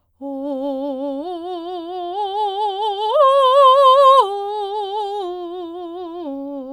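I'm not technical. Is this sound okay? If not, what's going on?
Yes, this sound is okay, and there's nothing going on with it that needs fixing.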